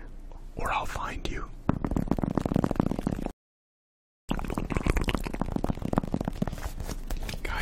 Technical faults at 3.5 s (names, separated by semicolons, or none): rebuffering stall